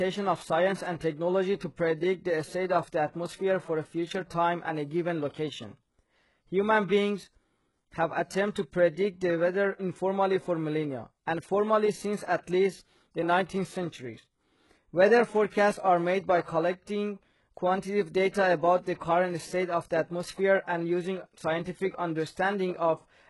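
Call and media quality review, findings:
Treble gritty and metallic throughout, s sounds lispy, nothing above 11.5 kHz. Points to HE-AAC compression at a very low rate, heavy damage, fitting roughly 12 kbps. Likely cause: spectral band replication copying lower bands upward under a coarse envelope, so rebuilt harmonics misalign across the crossover.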